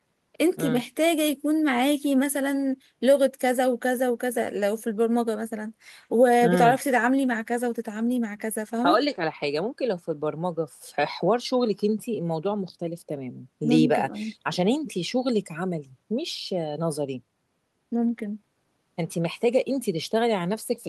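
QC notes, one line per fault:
No faults heard anywhere in the clip.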